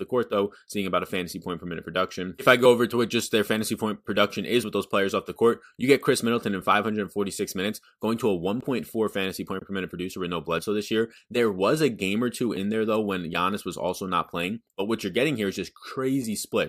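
Overlap between stream segments at 2.66, 6.62, 8.61, 10.59 and 12.57 s: overlapping 2-second segments get trimmed, removing 5 to 15 milliseconds of speech, heard as small skips.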